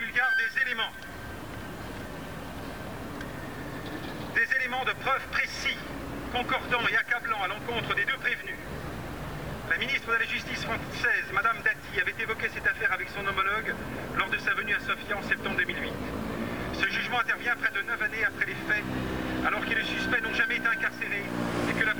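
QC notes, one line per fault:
throughout: low bit depth without dither. Grit about 25 dB down tracks the sound and vanishes in gaps, unlike steady hiss; likely truncation to about 7 bits.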